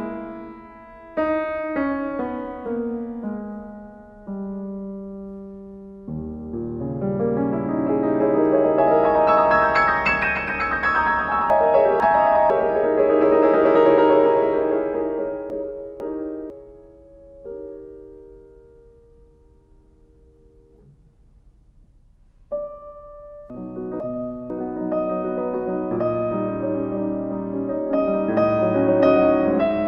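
At 11.5 s the audio jumbles for one second, until 12.5 s. Two half-second chunks play in swapped order. The chunk that belonged first arrives one chunk late. Nothing goes missing, but the sequence is wrong. Each swap leaves three hard joins around a garbled moment. The same chunks out of order fault returns from 15.5 to 16.5 s and again from 23.5 to 24.5 s.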